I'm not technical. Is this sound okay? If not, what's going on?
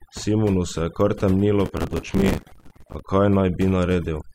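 No. Overdone noise removal affects the whole recording. A cleanup tool was set too aggressively, so it silenced parts of the sound along with the background hiss. The pauses fall to near silence with twinkling specks.

From about 1.66 to 3.0 seconds, right after "kar temnilo", there is processor overload crackle. The computer fell behind, missing many deadlines for tiny chunks of audio only a few milliseconds long and repeating stale chunks instead, which produces a gritty tearing crackle.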